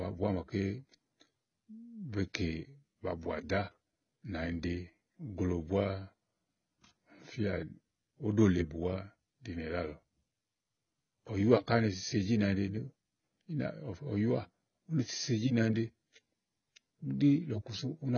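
Throughout, the speech stops at 6.6 kHz and sounds dull and smeared with a warbling, fizzy texture, likely heavy AAC compression near 16 kbps.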